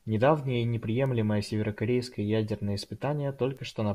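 A bit error spike at 1.06 s, just before "северокорейское ядерное", and another at 3.57 s: each is a single sample whose value jumped by a power of two, peaking at about -27 dBFS, then snapped back. Each sounds like a brief broadband tick, unrelated to the speech around it.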